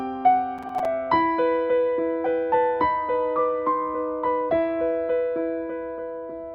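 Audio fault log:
0.58–0.85 s: processor overload crackle. For roughly a quarter of a second the sound breaks into a gritty, tearing crackle. The processor kept missing its deadlines, and each late buffer of around 5 ms dropped out as silence, about ten of them. On the waveform this shows as short flat gaps with sheer edges. On a spectrogram it shows as thin vertical broadband streaks wherever playback cuts out and resumes.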